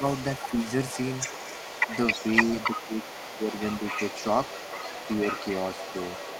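From 0.0 s to the end, a second voice runs faintly under the speech, roughly 10 dB quieter. This is the other side's voice leaking through, likely loudspeaker echo the echo canceller failed to remove. Unlike room reverberation, it is a separate talker rather than a smeared copy of the main voice.

From 2.87 to 3.16 s and again from 3.32 to 3.49 s, the main voice sinks by around 10 dB while that other voice is active. This is speech suppressed in double talk: with both sides talking, the canceller likely turned everything down. Unlike network dropouts, the dips track the overlapping speech rather than cutting to silence.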